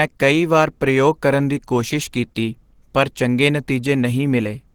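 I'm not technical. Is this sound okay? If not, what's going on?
No. The speech was likely squeezed hard by Opus compression, which here switched to its speech-saving mode to fit a very small data budget. From start to finish, the voice sounds clearly muffled and hoarse, with a rough, grainy edge.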